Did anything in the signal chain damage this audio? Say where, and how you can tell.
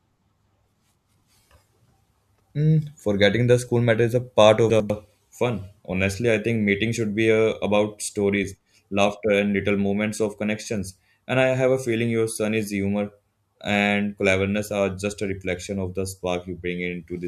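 Yes. Chunks out of order in the buffer or packet stage: at 2.3 to 2.5 s and again at 4.7 to 4.9 s, just after "matter is a part", a 100 ms block plays one slot late, swapping with its neighbour. You get a brief jumbled stutter with three hard joins.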